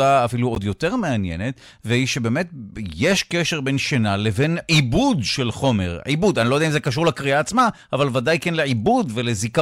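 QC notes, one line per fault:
0.55 to 0.58 s, corrupt frame decoded: about 30 ms long, a short chirpy blip cuts across the speech. It sounds like a couple of compressed frames arrived with flipped bits and the decoder played them anyway. The misread gains and codes drop energy into the wrong frequency bands for roughly two frames' worth of time. The result is a squeak that doesn't belong to the voice, and it's pretty loud, peaking around -10 dBFS.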